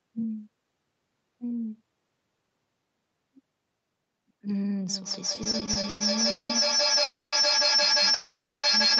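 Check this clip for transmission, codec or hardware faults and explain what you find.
Four faults are audible in this speech clip: a feedback howl, a run of stutter, and two call audio freezes, all in the second half of the clip.

Feedback howl, 4.89 s to the end: a microphone-to-loudspeaker loop gains level each pass and narrows to a tone around 4 kHz, peaking about 10 dB above the speech and pulsing roughly every 150 ms. On a spectrogram it is a bright horizontal line near 4 kHz, striped at that pulse rate.

Repeated stalls (stutter), 5.35 to 6.51 s: packets kept arriving late and the jitter buffer emptied nine times. The receiver stretched the last sound to cover 440 ms in total, with the longest stall at 190 ms, so the speech drags and stutters. The waveform shows short smeared or flattened stretches between normal segments.

Call audio freeze, 7.03 to 7.34 s and 8.14 to 8.65 s: the gaps were likely caused by packets held up in transit. 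Each one sounds like a fading buzz that drops to silence, filling 290 ms (190 ms silent) and then 490 ms (280 ms silent). Speech then resumes from where it stopped, later than before. Each freeze appears as a decaying smear followed by a flat, empty gap on the waveform.

Throughout the clip, nothing appears above 8 kHz, consistent with a band-limited call codec.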